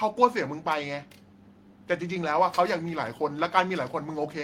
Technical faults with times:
none

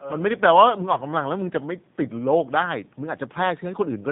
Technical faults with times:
0.00-4.12 G.729 codec
0.93-0.99 VoIP packet loss concealed by the speech codec

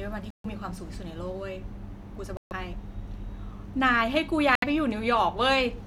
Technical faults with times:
0.30-0.46 Bluetooth dropout
2.37-2.52 Bluetooth dropout
4.55-4.64 Bluetooth dropout

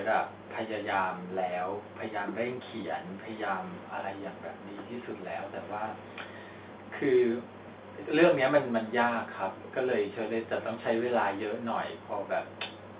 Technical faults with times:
none

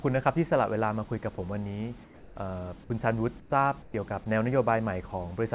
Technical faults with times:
1.36 sound dropped by the voice detector
2.04-2.36 comfort noise in place of the background
3.40-3.52 comfort noise in place of the background
3.82-3.94 comfort noise in place of the background

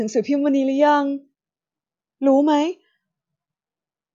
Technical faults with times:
none

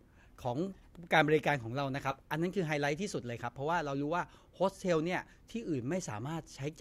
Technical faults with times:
2.11-2.16 compressed frames skipped

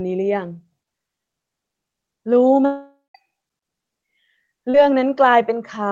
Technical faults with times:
2.65-3.16 long network dropout
4.70-4.84 short concealed packet loss

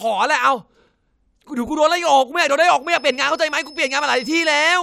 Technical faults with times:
2.79-4.82 feedback whistle

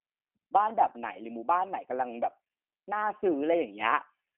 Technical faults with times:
0.00-4.37 G.729 codec

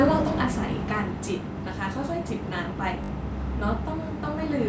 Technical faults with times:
0.05-1.47 automatic gain falling
3.04-3.10 repeated buffer

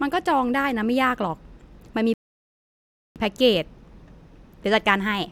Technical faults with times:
2.14-3.16 rebuffering stall

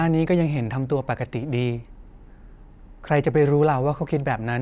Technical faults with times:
none

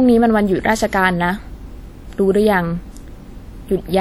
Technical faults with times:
0.00-4.00 WMA compression

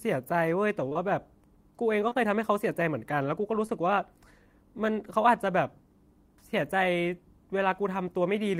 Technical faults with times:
0.89-0.97 short concealed packet loss
2.09-2.17 short concealed packet loss
3.67-3.70 short concealed packet loss

